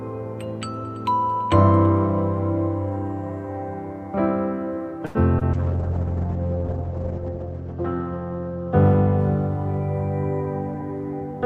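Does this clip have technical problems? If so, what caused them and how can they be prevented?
Yes, there are four separate problems, all from about 5 s on.

At 5.05 to 5.17 s there's a short stall from a late packet. A packet didn't show up on time, the jitter buffer ran dry, and the receiver just held the last bit of sound for about 96 ms until the packet landed, then picked up where it left off. Nothing is lost, but the sound hangs a touch too long and the delay grows by that same 96 ms. Prevention: give the jitter buffer a slightly deeper target so one late packet doesn't drain it.

Then from 5.39 to 5.43 s there's a short concealed packet loss. Around 20 ms of audio never made it to the decoder in time, so the receiver patched the gap by extending what came just before and then cross-faded back into the real signal. You hear it as a tiny smear or wobble where that slice should be. Prevention: turn on Opus in-band FEC or a little redundancy so a single lost packet can be rebuilt.

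The big one is a call bitrate drop from 5.54 to 10.80 s. The bandwidth estimate collapsed and the encoder went from 96 kbps down to 9 kbps, staying at the bottom for about 1.9 s. At that rate Opus codes much more coarsely and pulls the audio bandwidth in from 20 kHz to 8 kHz, so everything goes dull, muffled and a bit watery until it climbs back. Prevention: keep congestion control from overreacting, and set a sensible minimum bitrate floor.

Finally, from 10.74 to 11.44 s there's a jitter buffer speed-up. After the delay built up earlier, the buffer was holding more than it wanted, so the receiver trimmed out tiny pitch-period-sized chunks one after another, around 40 ms in total. That plays the audio at about 104% speed with the pitch unchanged. Prevention: let the buffer shrink more gradually, or absorb the excess during quiet stretches.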